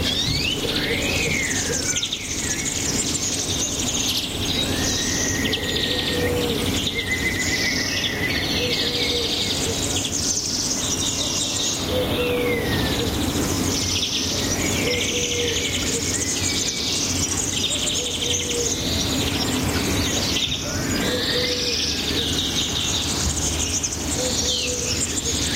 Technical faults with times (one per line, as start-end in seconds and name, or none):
0.00-25.55 gain pumping